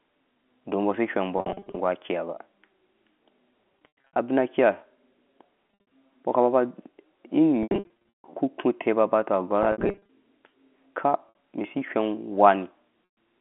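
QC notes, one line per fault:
1.38–1.76, 3.72–4.16, 5.68–5.91, 7.63–8.27, 9.63–10.09, 11.29–11.35, 13.12–13.16 s, packet loss with pitch repetition: bursts of lost packets, up to 460 ms missing within 640 ms, are bridged by the receiver repeating the last pitch period and fading it over about 50 ms. Brief gaps sound like a held, buzzy tone. The 150 ms run inside 7.63–8.27 s outlasts the fade, drops to silence, then cross-fades back into the speech.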